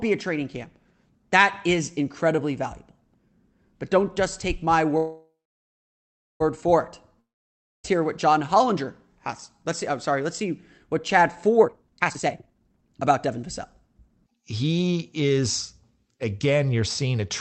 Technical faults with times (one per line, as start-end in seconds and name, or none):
4.97-6.42 call audio freeze
7.20-7.86 long network dropout
11.63-14.31 jitter buffer speed-up